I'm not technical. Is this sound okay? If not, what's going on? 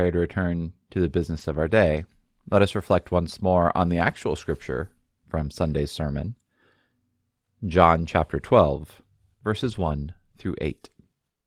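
No, not quite. Three short patches sound rough and fuzzy: right after "to return to the" (1.29 to 1.71 s), between "once more on the" and "scripture from" (around 4.1 s), and at 9.63 to 9.89 s. Each is a lost packet rebuilt from error correction. Bits of audio went missing in transit, and a low-quality backup copy filled the gap, so nothing drops out, but those moments sound grainier.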